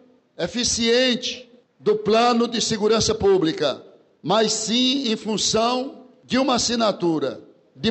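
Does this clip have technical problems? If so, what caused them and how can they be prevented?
No, the signal holds steady throughout, with no technical faults to trace or prevent.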